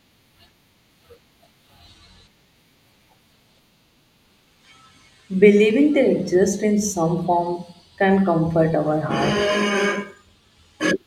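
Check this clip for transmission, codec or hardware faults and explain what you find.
Nothing found; no faults detected anywhere in the speech recording.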